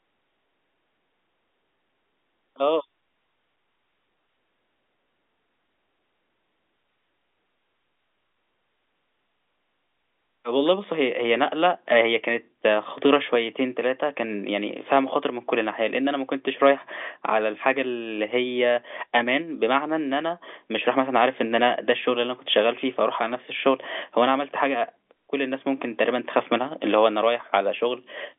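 Nothing goes wrong anywhere in this speech, which simply has the narrow, boxy sound of an ordinary G.711 phone line, its band running from roughly 250 Hz up to about 3.5 kHz.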